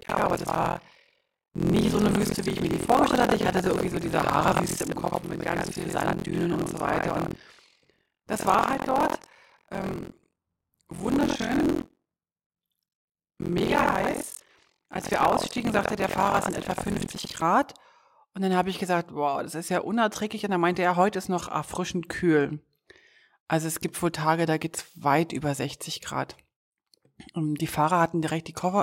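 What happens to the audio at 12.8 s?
At 12.8 s you're in the middle of buffer tearing that runs from the start to 17.43 s. Writer and reader have slipped, splicing in old audio and giving a robotic 43.1 Hz buzz over the speech, which fits a 1024-sample buffer.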